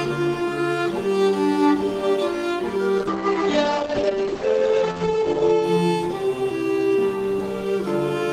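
From 2.99 s to 5.69 s there is a call bitrate drop. The bandwidth estimate fell and the encoder was given far fewer bits. The coarseness points to a fall from about 32 kbps to about 10 kbps. The audio loses its top end, and the cut-off moves from 20 kHz down to 8 kHz. It sounds muffled and rough. The worst stretch lasts about 2.5 s. Then the bitrate recovers and the highs return.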